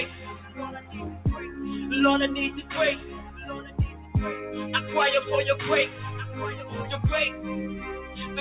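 The level pumps and flutters throughout, with held sound and tails sinking while attacks push through, swinging by about 15 dB. That is a noise suppressor applied to music or sounds: a speech-tuned suppressor stayed on, mistook steady and decaying content for noise, and kept turning it down. The sound cut by the noise suppressor is clearest from 0.2 to 1.25 s and from 3.02 to 4.15 s, where it dips by about 9 dB, and again from 8.02 to 8.18 s, by about 6 dB. In each case sustained material was pulled under the rest as if it were background. Through all of this the band stops near 4 kHz, which points to a narrowband call codec on the path.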